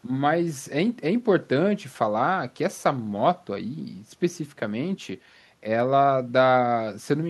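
Nothing in the recording gives the ear any trouble, with no dropouts, clicks or glitches turning up anywhere along the way.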